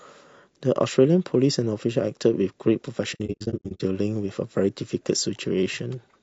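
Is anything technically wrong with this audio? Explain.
Yes. There are two faults.

Low-delay AAC compression runs through the whole clip. The speech sounds rough and grainy. Noise fills the gaps between the pitch harmonics, and the top band sounds thin and synthetic. The likely cause is AAC-ELD, the low-delay codec of video calls. Its short frames resolve harmonics poorly and use bits inefficiently. The damage is plainly audible and fits a low bitrate of around 32 kbps.

AAC frame loss with muting occurs from 3.14 to 3.81 s. Lost frames had their spectrum set to zero. The overlapping windows fade each gap out and back in. About 420 ms of sound is missing, scattered over 660 ms. The longest single hole lasts about a tenth of a second. The speech breaks into soft-edged dropouts there.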